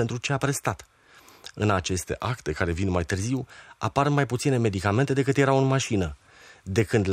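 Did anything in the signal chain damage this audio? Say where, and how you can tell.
Yes. From 2.02 to 3.10 s the speech abruptly slows by about 5.8% and drops roughly 103 cents, about a semitone, then snaps back to normal speed and pitch. This is a drift correction step, likely at the driver or buffer stage, where clock-matching software shifted the playback rate in one jump to rebalance its buffer. Unlike wow or flutter, the offset is constant rather than wavering, and it starts and ends suddenly instead of gliding.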